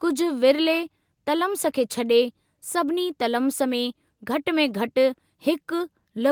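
A listener hears nothing technically wrong in this speech recording: the signal runs continuously with no faults at any point.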